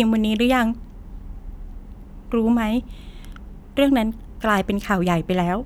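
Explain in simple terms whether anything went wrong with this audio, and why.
Nothing went wrong here: the speech comes through as a steady, continuous signal with no technical faults to report.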